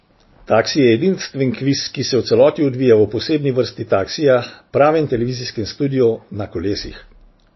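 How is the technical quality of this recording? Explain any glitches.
Technical quality is poor, with plainly audible codec damage throughout the speech. Treble stops near 5.8 kHz and weak components flicker, sounding watery; likely MP3 compression at a starved bitrate, fitting roughly 24 kbps.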